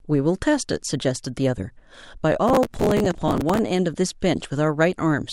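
Speech with a gritty crackle from 2.48 to 3.59 s: processor overload crackle, where dozens of missed buffer deadlines, consistent with buffers of roughly 5 ms, repeat stale audio with hard edges.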